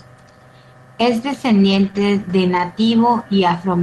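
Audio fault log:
1.71–1.89 s, 1.95–2.01 s and 2.53–2.59 s: lost packet rebuilt from error correction. The audio never drops out. Instead it turns rougher and grainier for 100 ms in the first stretch and about 40 ms in each of the others. Packets went missing, but the next packet carried a low-bitrate copy of each one. The decoder played those copies instead. They hold less detail, so the sound coarsens. This rides on an Opus path with a 12 kHz upper limit.
1.91–1.95 s: short concealed packet loss. About 20 ms of audio never arrived. The receiver filled roughly 21 ms by stretching the last sound it had. It then blended back into the incoming audio. This gives a brief smear or wobble. It sits right between two rebuilt stretches, so the roughness there runs almost unbroken from 1.71 to 2.01 s.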